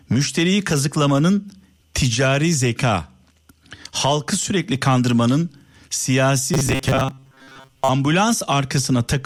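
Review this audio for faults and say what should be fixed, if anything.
From 6.54 to 7.89 s the speech becomes a rigid 133 Hz buzz, robotic sound from repeated short buffers: a roughly 7.5 ms chunk is looped, likely because audio arrives too late. Enlarge the jitter buffer so playback never runs dry.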